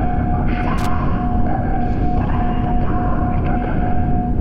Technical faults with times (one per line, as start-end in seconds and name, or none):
0.78-0.86 loose connector crackle